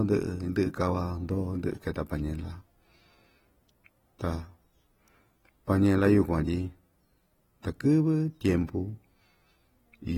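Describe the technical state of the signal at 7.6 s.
At 7.63 s a brief pre-echo precedes a sharp attack. A hiss smears about 12 ms ahead of it, visible as a low-level fringe before the waveform's onset. The underlying smeared, fizzy texture is likely AAC compression, plainly audible and consistent with roughly 43 kbps AAC-LC. A spectrogram shows nothing above 19.4 kHz.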